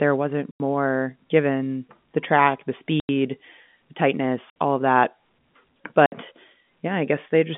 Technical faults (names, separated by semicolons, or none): packet loss filled with silence